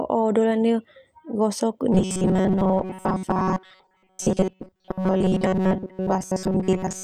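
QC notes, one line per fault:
1.93–7.04 s, robotic sound from repeated short buffers: new audio is likely arriving too seldom, so playback fills the gaps by looping the last short block, skipping most of the real audio. The loop repeats at 188 Hz, which points to a buffer of about 5.3 ms, and that rate imposes a fixed pitch on the speech. From here to the end the voice becomes a rigid, metallic buzz that still loosely tracks the words.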